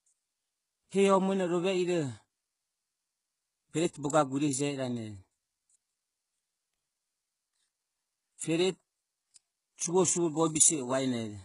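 Throughout, s sounds are gritty and metallic; the spectrogram shows blocky, copied-looking treble ending at 11.2 kHz, likely from heavy HE-AAC compression near 12 kbps.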